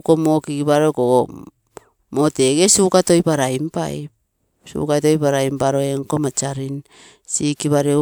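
No technical faults are audible.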